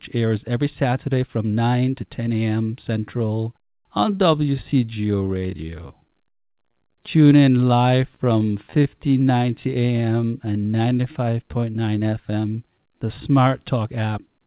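A speech clip in which, from 2.95 s to 13.68 s, the pace suddenly drags while the pitch holds steady, until just before "app tune in or". This is likely a time-stretched section, where software lengthened the passage to about 0.72 times normal speed by repeating short slices rather than resampling. Between 6.30 s and 6.96 s there are a handful of tiny hiccups and ticks, roughly four of them, none longer than about 15 ms, together around 50 ms. These are scattered short gaps: isolated packets went missing or arrived too late, and the receiver covered each hole by extending the preceding sound. Right after, from 6.97 s to 9.68 s, the speech stretches out further at unchanged pitch, running at 95% speed and gaining 131 ms, with drawn-out sounds. That is a jitter buffer slow-down, the receiver repeating single pitch periods and bits of pauses to rebuild its reserve of buffered audio. From 11.59 s to 12.52 s the speech instead sounds hurried, running at 113% speed with roughly 150 ms cut out. 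This is a jitter buffer speed-up, where excess buffered audio was trimmed by removing short pitch-period pieces to reduce delay, all within the narrowband call sound that carries nothing above 4 kHz.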